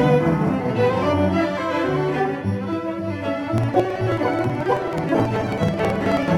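From 3.58 s to 6.28 s the music is hit by periodic USB or driver dropouts. Every 0.054 s, about eighteen times a second and roughly fifty times in all, something stalls the audio path and around 10 ms of signal is skipped outright. The splices produce a steady ticking. A spectrogram shows evenly spaced thin vertical broadband lines, and the waveform shows abrupt jumps at each join rather than silent gaps.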